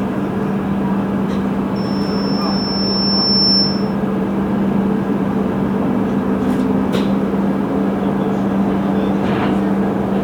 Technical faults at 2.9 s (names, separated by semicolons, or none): loudspeaker feedback squeal